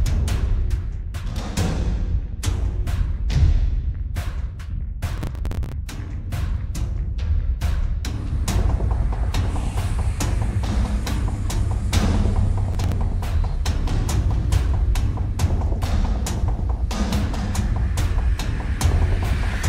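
Processor overload crackle appears twice, from 5.13 to 5.72 s and again from 12.73 to 12.92 s. In each burst the processor falls behind and misses a run of buffer deadlines, roughly twenty in the first and a handful in the second. Each missed buffer replays a fragment of old audio with hard edges. The result is a gritty tearing over the sound, with fragments that fit buffers of around 10 ms, and it stops as soon as the load eases.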